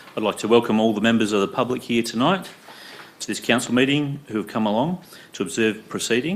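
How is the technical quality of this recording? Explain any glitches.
The recording has two loud pops, at 1.70–1.72 s and 3.67–3.69 s. Each is a single sharp click peaking a few dB above the audio, most likely from an electrical transient such as a switch or static discharge, while the sound continues underneath.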